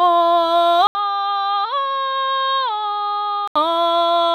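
At 0.87 s the music drops out for 80 ms, then returns noticeably quieter, duller and boxier, with nothing above 5.6 kHz and a faint new hiss underneath. The likely cause is an input switched to a poorer device. On a spectrogram, the upper band is empty until 3.56 s.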